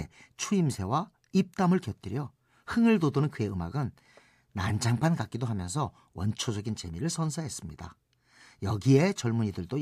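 No technical faults are audible anywhere in the speech.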